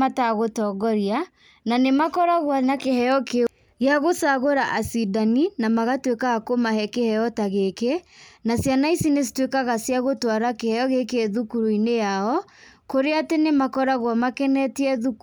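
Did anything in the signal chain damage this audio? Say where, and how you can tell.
No, nothing audible in this speech points to damage at any stage of the chain.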